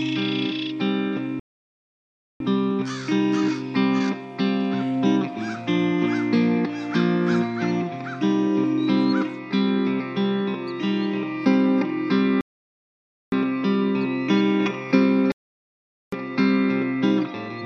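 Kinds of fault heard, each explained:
Rebuffering stall: The audio drops into silence three times, at 1.40 s for about 1.0 s, at 12.41 s for about 0.91 s, and at 15.32 s for about 0.81 s, and each time it picks up exactly where it left off, with nothing skipped. The player exhausted its downloaded audio and paused until more data arrived, so no content is lost, but the gaps add roughly 2.7 s to the running time.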